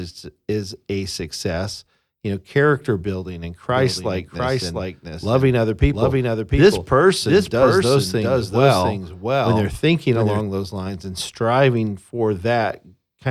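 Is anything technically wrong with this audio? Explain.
Yes. From 3.71 s to 10.41 s the speech has a doubled audio track. A second, full-band copy trails the original by roughly 0.7 s, about 5 dB quieter. It is likely the same signal captured a second time through a slower path. Unlike an acoustic echo or reverb, the copy has no decay tail and no room colouring, and it switches on and off abruptly at those two points.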